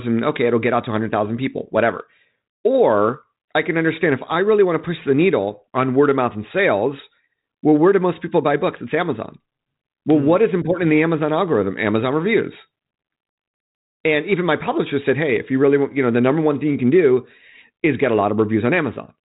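No technical faults can be heard in this speech recording.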